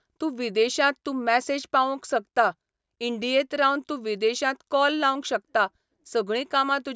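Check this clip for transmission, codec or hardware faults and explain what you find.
No faults detected here.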